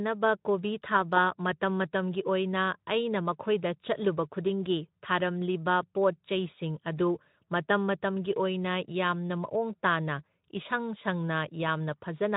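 No technical faults to report in this speech recording, and the Speex coding it passes through is working as intended.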